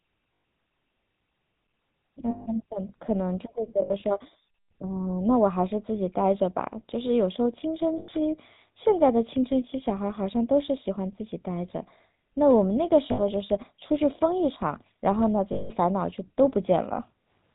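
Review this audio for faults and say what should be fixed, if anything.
The speech has been passed through the GSM full-rate codec at 13 kbps, which rebuilds the vocal tract from coarse pulse excitation and discards everything above 4 kHz. Throughout, the sound is plainly buzzy and gravelly, with a dull, band-limited top end.

Lost GSM frames were patched by repeating the last good frame at a falling level. This produces a brief rough, metallic ring at 0.34 s (100 ms), 2.3 s (160 ms), 7.98 s (100 ms), 13.12 s (60 ms) and 15.52 s (180 ms). Between 3.82 and 4.03 s the losses are scattered, the longest run about 70 ms.

To prevent both, carry the call over a wideband codec on a link with error protection or redundancy, so that the buzz and the dropouts never form.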